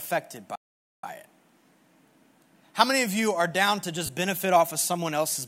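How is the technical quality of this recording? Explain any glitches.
The recording has two clear glitches, and a light layer of lossy compression sits under the speech throughout.

First, a playback stall runs from 0.55 s to 1.04 s. The speech stops mid-flow and the output goes silent for about 480 ms. Then the speech picks up again. The likely cause is a player that ran short of data, or a playback thread that was blocked. Output halts until it recovers.

Second, lost LE Audio frames occur between 4.06 s and 4.09 s. This falls right after "you are down to" and just before "benefit off of". The gap is 30 ms, which fits three missing 10 ms LC3 frames. The decoder filled the hole by reusing the last spectrum with random signs. Tonal parts of the speech turn briefly into a noisy smear. The gap is short, so the fill never fades to silence.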